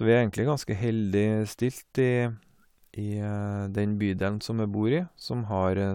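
Speech recording with no audible technical faults anywhere in the signal.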